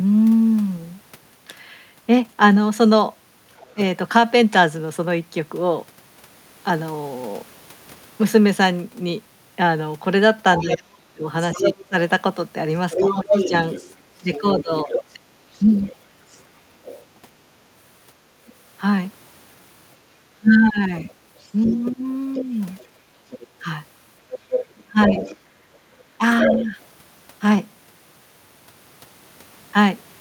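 At 3.57 to 3.69 s a faint second voice slips in, roughly 30 dB under the talker: the other side's voice leaking through, most likely loudspeaker echo the canceller failed to subtract from the microphone. Right after, at 3.74 to 3.79 s, the talker's own voice briefly sags by around 15 dB for about 50 ms. This is speech suppressed in double talk, probably because the canceller mistook the overlap for echo and turned everything down.

From 10.58 to 18.53 s the leak returns much stronger, the far voice only a few dB below the talker and clearly audible as a competing second speaker, likely residual echo again. Inside that span, 10.61 to 15.73 s, the talker is repeatedly ducked, as deep as roughly 30 dB, adding up to about a second and a half, a likely sign of double-talk suppression.

Between 20.34 and 26.76 s the talker is pushed down again in pieces, by up to roughly 15 dB over about a second and a half in total. 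Meanwhile, from 21.38 to 26.66 s, the far voice leaks through at near talker level, likely uncancelled echo. At 22.92 to 23.26 s the room sound itself dips by about 7 dB for roughly 300 ms and then recovers: the background gated by the echo canceller. What separates it from double-talk suppression is that the ambience, not the voice, is what drops out.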